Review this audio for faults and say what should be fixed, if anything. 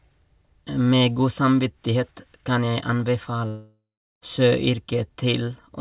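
From 3.48 to 4.23 s, a long network dropout likely cut off the packet stream, so the receiver had nothing to play for about 0.74 s. It stretched the last sound into a fading buzz over the narrowband G.711 mu-law audio, which has nothing above 4 kHz. Roughly the final 0.38 s of the gap is silent, and the speech returns with the lost stretch missing. To prevent this, add forward error correction or redundancy to the stream and keep a more stable network path.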